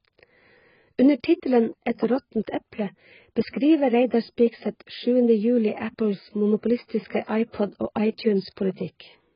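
Heavy AAC compression, likely AAC-LC at a very low bitrate consistent with about 12 kbps, runs throughout the speech. The encoder discards everything above 5.1 kHz and starves the remaining bands, so the sound is dull and smeared, with a warbling, fizzy texture on sibilants.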